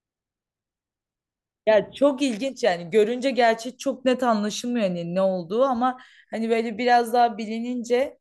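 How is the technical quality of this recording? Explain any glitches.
Nothing in the recording registers as a technical fault; level and timing hold steady throughout.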